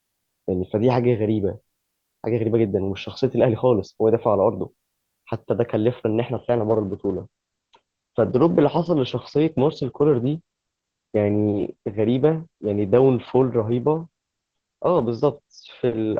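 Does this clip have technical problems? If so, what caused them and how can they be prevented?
Yes. From 6.34 s to the end at 16.19 s, the speech abruptly loses its brightness: nothing remains above 8.9 kHz, and the sound turns thinner, with codec artefacts rising, yet there is no gap at the switch. This is an adaptive stream at a lower bitrate. The connection slowed, so the player switched mid-clip to a cheaper encoded version, and the sound fits a drop from roughly 64 kbit/s to about 12 kbit/s Opus. Prevent it with a steadier, faster connection or by pinning the stream to its higher-bitrate version.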